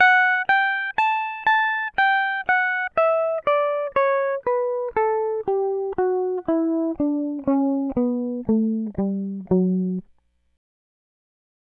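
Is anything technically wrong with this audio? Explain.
No, nothing is technically wrong with this music.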